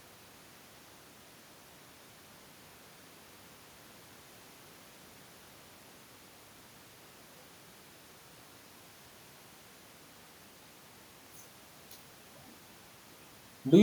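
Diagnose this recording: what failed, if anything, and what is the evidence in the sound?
Nothing in the chain has failed here: the background noise is just the room the microphone sits in, and the level shifts around six and eleven seconds are the talker moving relative to the mic, not anything the system did.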